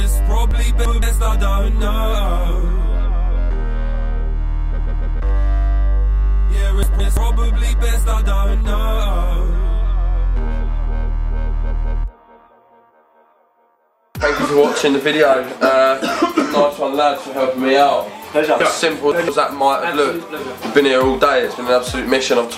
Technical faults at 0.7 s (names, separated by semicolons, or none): chunks out of order